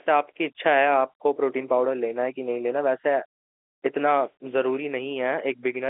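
No technical faults can be heard in this speech.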